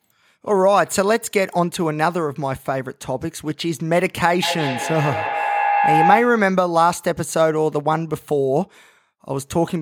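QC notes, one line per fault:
4.42–6.56 s feedback howl: a tone near 700 Hz builds up to roughly the speech level, the loop repeating about every 150 ms. Sound circles from microphone to loudspeaker and back between two devices on the call, gaining level each pass and narrowing to that pitch.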